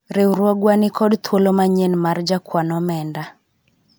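No technical faults can be heard anywhere in the recording.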